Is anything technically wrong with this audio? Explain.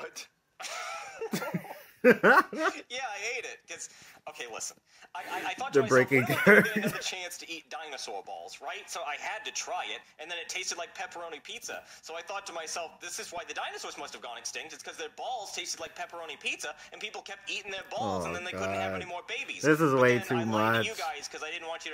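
Yes. DAB burbling breaks through five times: 0.88 to 1.20 s, 6.91 to 7.09 s, 13.30 to 13.45 s, 15.82 to 15.87 s and 17.68 to 17.81 s. Weak reception lets bit errors, a few tenths of a percent at most, slip past error correction into the MP2 data. Corrupted samples put short blips of noise into single sub-bands, and corrupted scale factors make sub-bands leap in level for up to a frame.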